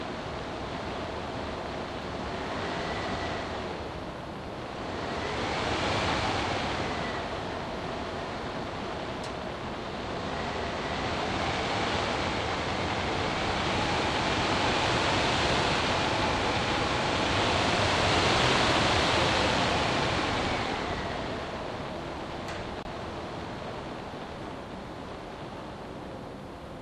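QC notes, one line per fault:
22.83–22.86 s, corrupt frame muted: the sound drops abruptly into a 36 ms gap of silence and then resumes on time. A damaged compressed frame failed to decode and the player muted it. The gap's length fits a single lost frame, and the timing is preserved.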